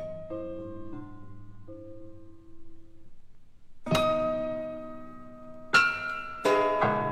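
No technical faults are audible.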